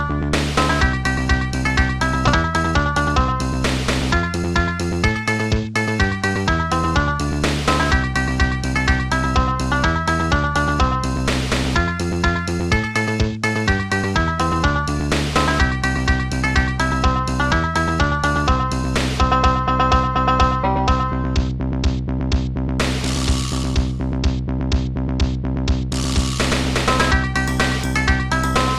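At 2.27 s the sound lurches forward with no gap and no filler. About 0.4 s of audio is missing, and the two sides are butted straight together. This is a skip ahead. A run of audio was discarded, probably by a jitter buffer that had overfilled, while later material was already queued. Playback resumed from the newer audio, and the delay shrank by roughly the same 0.4 s.

Right after that, from 2.43 to 3.16 s, the sound turns briefly hurried while its pitch stays put. It plays at about 116% speed, and around a seventh of a second is shaved away. It happens again, more briefly, from 4.22 to 4.43 s at about 117%, losing only a few hundredths of a second. Both are jitter buffer speed-up. The receiver held more audio than its target, so it repeatedly cut out pitch-period-sized slivers to pull the delay back down.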